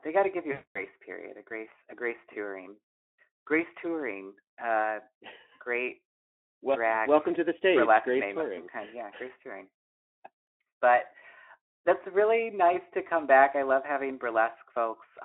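A speech clip carried over a Speex line with a band of roughly 250 to 3400 Hz has one fault: VoIP packet loss concealed by the speech codec, from 0.51 to 0.87 s, between "they got to give" and "period a grace a". The decoder stretched its last pitch and filter into a buzzy tone or a coloured noise that fades, which points to about 240 ms of lost frames. The voice then stayed weak or distorted for a while after packets resumed. On a spectrogram this shows as smeared energy dimming frame by frame. The waveform shows a steadily shrinking envelope.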